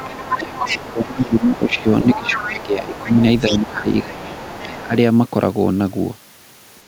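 From 0.0 to 0.28 s and again from 0.54 to 1.84 s, 2.01 to 2.64 s and 2.92 to 4.69 s, a second voice sits under the speech, about 20, 10, 15 and 20 dB below it. This is the other side's voice leaking through, likely loudspeaker echo the canceller left in the microphone signal. It adds a voice rather than removing anything.

Overlapping those stretches, at 0.04 to 1.86 s, 2.03 to 3.1 s, 3.49 to 4.37 s and 4.64 to 4.94 s, the main speech itself sinks by up to about 20, 10, 15 and 20 dB, dulling or breaking into pieces. This is speech suppressed in double talk, likely the canceller ducking everything while both sides spoke. Unlike leakage, the talker gets quieter instead of gaining a second voice.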